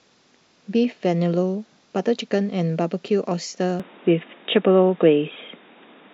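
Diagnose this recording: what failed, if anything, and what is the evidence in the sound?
The input was likely switched to a poorer device at the driver or device-selection stage. From 3.80 s to the end the speech turns dull and boxy, with nothing above 3.8 kHz, a level shift of about 5 dB, a new noise floor about 35 dB down, and no gap at the switch.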